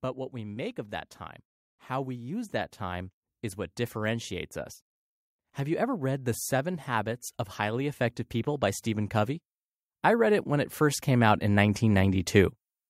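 From 5.41 to 8.01 s, just after "is what differentiates us", and again from 10.17 to 12.63 s, speech and background swell together by about 5 dB: automatic gain rising as the level control boosts a quiet input.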